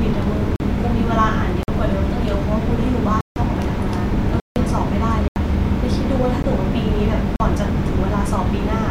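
The speech drops out to blocks of digital silence seven times: 0.56–0.60 s (40 ms), 1.63–1.68 s (49 ms), 3.21–3.36 s (152 ms), 4.40–4.56 s (160 ms), 5.28–5.36 s (80 ms), a 15 ms gap at 6.43 s, and 7.36–7.40 s (40 ms). In each, samples are replaced by zeros with no fade. The 15 ms gap registers as a tick or dip rather than silence.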